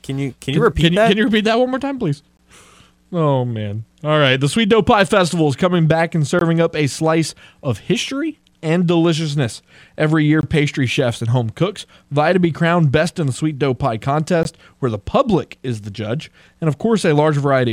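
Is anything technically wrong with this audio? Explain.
Yes, two problems. From 0.66 to 1.38 s and 4.72 to 5.17 s, speech peaks crackle slightly: hard clipping, with the signal about 1 dB over the ceiling, so the tops are sliced flat. At 2.37, 6.39, 10.41 and 14.43 s there is a hard-edged 20 ms hole, repeating every 4 s: a gap between chunks, where silence is inserted at each join.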